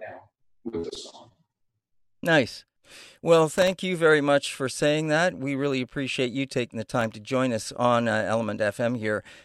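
Around 3.49 to 3.73 s, just before "you very much for", there's a burst of processor overload crackle: a gritty tearing laid over the speech. The machine couldn't fill its very short buffers, well under a millisecond each, fast enough. About 15 missed deadlines each dropped in a hard-edged sliver of silence. It returns more briefly at 6.95 to 7.16 s, after "appreciate you taking the" and before "to join us on", this time with only a handful of gaps.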